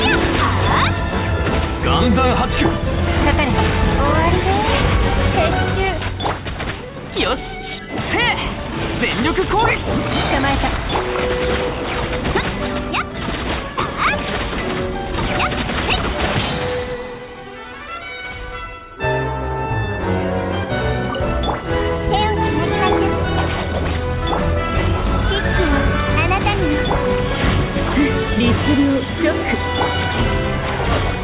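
There are no technical faults to describe in this audio; it passed through a call path whose band stops at about 4 kHz.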